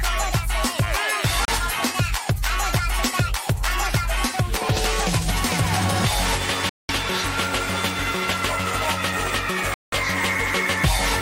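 Three gaps of silence cut the sound at 1.45 to 1.49 s, 6.69 to 6.91 s and 9.74 to 9.94 s, lasting about 30, 200 and 180 ms. Each likely comes from a Bluetooth dropout: packets arrived too late, output went silent, and playback resumed further along.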